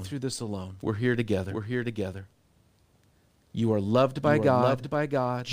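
From the start and all the way through, the speech has a doubled audio track: a second full-band copy trails the original by about 0.7 s, sitting roughly 5 dB quieter. It has no reverb tail or room colour, so it doesn't read as an echo. It sounds like a dry twin talking over itself a beat late. The likely culprit is the signal being captured twice, with one path running slower than the other.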